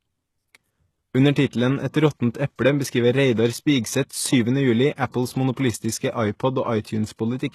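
Throughout, the speech sounds like HE-AAC compression: the treble past about 12.3 kHz is gone, and the replicated top end makes s sounds gritty, likely from a low bitrate around 16 kbps. At 4.95 to 4.98 s and 5.11 to 5.14 s, pre-echo puts a short hiss just ahead of two attacks, codec noise smeared backward by about 27 and 29 ms.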